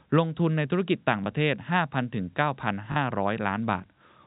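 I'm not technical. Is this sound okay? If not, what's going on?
No. There is packet loss with last packet repeated. Small pieces of the sound went missing: 20 ms at 1.24 s, and 40 ms from 2.92 to 2.96 s. The player filled each gap by replaying the piece just before it. You hear a small blip and a brief robotic stutter.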